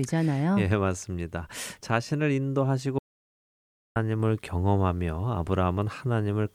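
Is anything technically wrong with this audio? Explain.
Yes. From 2.99 to 3.96 s the speech drops out to dead digital silence, no room tone at all, losing almost a second. This audio dropout to silence likely comes from the input disconnecting or muting while zeros kept being recorded.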